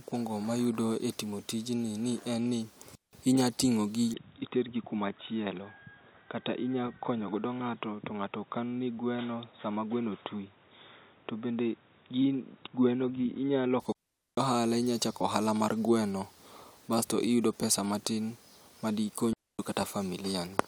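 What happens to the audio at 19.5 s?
That's a digital wireless dropout: right after "iyudo pesa matin ma", from 19.33 to 19.59 s, the receiver loses too much data and mutes, leaving a clean quarter-second hole with no noise burst.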